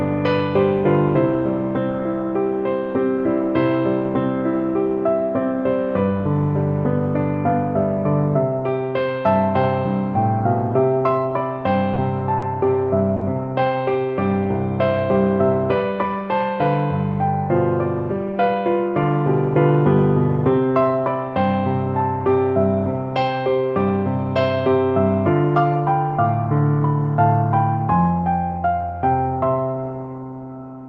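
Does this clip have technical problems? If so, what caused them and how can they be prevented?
Yes. Short stalls from late packets occur at 11.93–11.98 s, 12.38–12.44 s and 13.16–13.23 s. In each, the jitter buffer ran dry and the receiver held the last sound for 30, 40 and 50 ms, losing nothing. On a spectrogram they appear as brief frozen, smeared stretches. Giving the jitter buffer more headroom against bursty network delay would prevent them.

A jitter buffer speed-up runs from 18.26 to 18.56 s. The backlog was trimmed by cutting about 40 ms of pitch-period pieces, so the sound plays at 111% speed with unchanged pitch. The waveform shows small seams where whole cycles were cut out. Smoother playout adaptation would prevent it.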